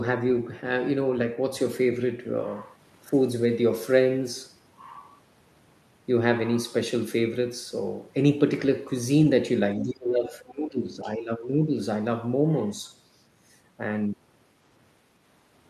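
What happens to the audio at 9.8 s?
From 9.78 to 11.75 s the speech sinks by as much as about 20 dB. That's speech suppressed in double talk, likely an echo canceller ducking everything while both sides spoke. Right at its start, 9.8 to 9.84 s, there's a brief scrap of the other side's voice leaking through, about 20 dB under the speech, likely residual loudspeaker echo the canceller missed.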